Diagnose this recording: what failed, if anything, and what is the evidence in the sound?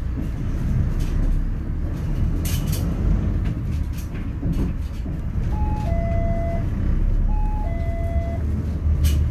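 No stage in the chain shows a failure: nothing audible points to a fault anywhere in the signal path.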